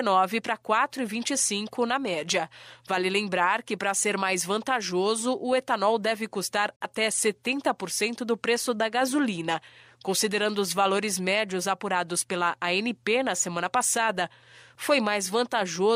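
Speech with a brief hole from 6.76 to 6.86 s, where the sound fades out in about 8 ms and drops to silence: a digital broadcast dropout, fitting a single lost frame muted by the receiver.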